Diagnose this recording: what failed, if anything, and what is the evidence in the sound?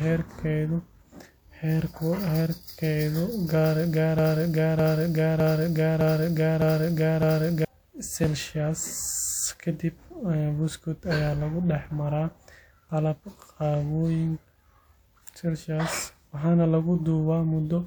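From 4.19 s to 7.65 s the speech sticks: a fragment of about 0.61 s plays six times in a row, each copy identical and butted against the next, a classic broken-record loop. Nothing new is heard until the loop releases at 7.65 s, so the speech that belonged in that stretch is gone. The likely failure is a stall in the player, encoder or stream, which kept re-sending the last fragment it held instead of fresh audio.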